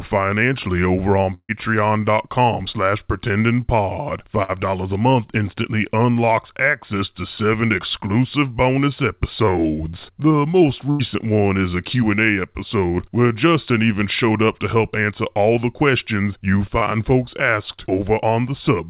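Bursts of packet loss hit this speech recording at 1.34–1.52 s, 4.43–4.52 s and 10.91–11.02 s: runs of 60 to 150 ms of audio never arrived, so the receiver stretched the last sound into a fading buzz or hiss, falling to silence in the first gap, before resuming further on with that stretch gone. A short concealed packet loss at 16.78–16.84 s is a quicker version: about 30 ms went missing and was patched by extending the preceding sound before blending back, leaving a brief smear or wobble. Throughout, the narrowband call codec, whose coding noise fits G.711 mu-law at 64 kbps, leaves nothing above 4 kHz.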